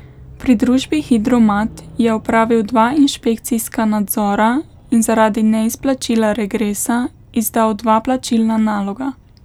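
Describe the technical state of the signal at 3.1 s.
At 3.15 s there is a single sharp click in the speech. This is most likely dropped samples. A fraction of a millisecond is missing, so the waveform jumps straight to a later value. Nothing audible is lost. The jump alone makes the click.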